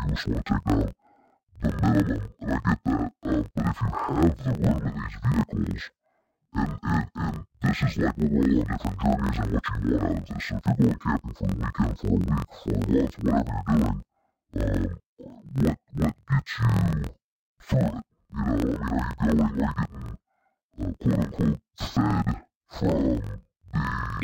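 Throughout, interleaved audio read as planar: each 23.2 ms block's halves play together at half speed, so speech sits an octave low, doubled and choppy, with halved harmonic spacing on spectrograms.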